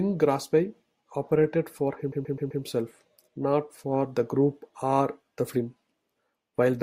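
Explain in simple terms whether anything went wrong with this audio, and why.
Right after "operated for", at about 2.11 s, there's a stutter from repeated frames: the same 128 ms chunk of compressed audio got played four extra times, through 2.62 s. That's why the speech catches and loops there, and the clip runs about half a second longer.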